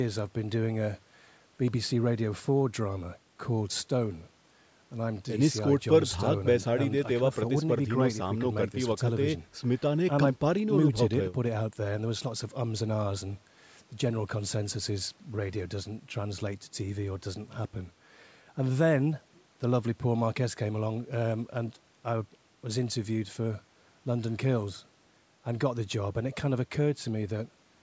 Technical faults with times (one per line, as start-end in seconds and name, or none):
none